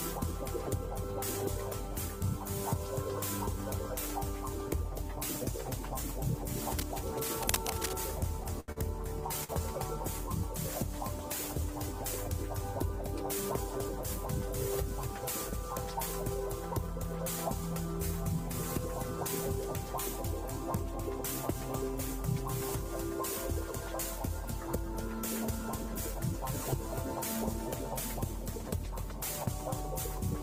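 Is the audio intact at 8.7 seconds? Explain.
No. From 8.43 to 9.51 s there is repeated packet loss (robotic sound). Four gaps fall close together in that second. Each is covered by stretching the last sound forward, about 168 ms in all, with roughly 80 ms simply missing. The longest gap is 78 ms. The result is a choppy, robotic stutter. A single dropout would leave one clean hole. Here the patched holes repeat rapidly and concealment covers about 16% of the stretch.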